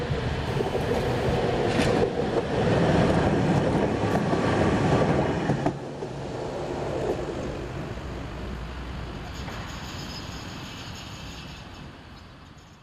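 A hard, raspy buzz at 217 Hz, rich in harmonics and about 21 dB below the sound, runs steadily from 0.47 to 1.37 s. This is GSM phone buzz: a nearby 2G phone in a call transmits bursts 217 times a second, and the audio circuitry rectifies those radio pulses.

From 6.90 to 9.34 s the everyday sound abruptly rushes ahead at about 1.84 times its normal pace, hurried while its pitch stays unchanged. This time-stretched section was likely squeezed by software that dropped short pieces to fit a shorter length.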